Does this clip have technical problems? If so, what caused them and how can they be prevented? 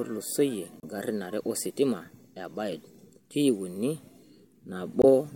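Yes. Damaged data in a compressed stream at 0.80–0.84 s, just before "are ositima e", and again at 5.02–5.05 s. Corrupted bytes made the decoder misread those frames and lose sync, producing short glitches while it found the next frame header. Verifying files with checksums and using error-checked transfer or storage would prevent this.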